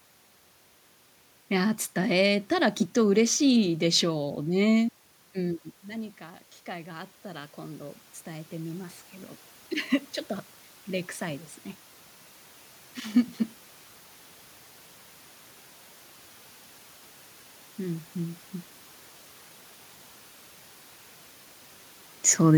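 At 5.35 s the level of the speech drops by about 14 dB as the talker moves back from the microphone, and from then until 9.05 s the automatic gain rising is audible: the gain control, finding the input too quiet, raises its gain gradually by about 7 dB. The voice climbs back over those 3.7 seconds, and the room noise climbs with it, so the background swells along with the speech.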